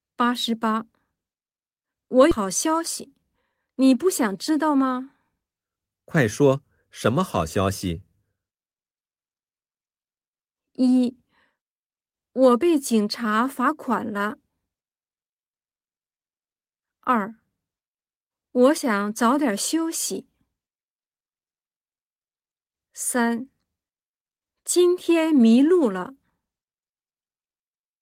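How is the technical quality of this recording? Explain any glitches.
The recording has two timing glitches close together near the start.

At 2.31 s the speech jumps abruptly forward with no gap, and about 0.7 s of audio is simply missing. This is a skip ahead: that stretch was dropped while later audio was already queued, so the two sides of the cut are joined almost directly.

From 2.41 s to 5.65 s the speech sounds slightly hurried but keeps its normal pitch, running at about 108% speed. This is a jitter buffer speed-up: with excess audio buffered, the receiver trimmed many tiny pitch-period slices, removing around 0.3 s in total.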